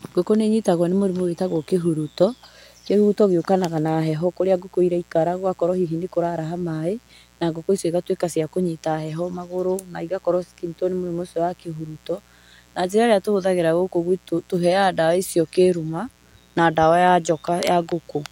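Throughout the speech, sharp switching spikes from a dimmer, rectifier or unshielded cable leak into the signal twice per 60 Hz mains cycle. This mains buzz has harmonics reaching into the kilohertz range and sits around 35 dB below the speech as a steady, raspy drone.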